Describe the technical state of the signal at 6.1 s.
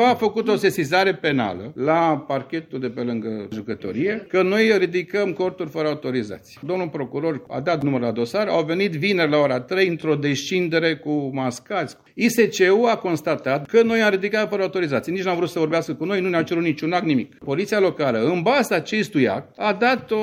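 At 6.1 s the signal is intact, with no dropout, clipping, glitch or other technical fault audible at that point.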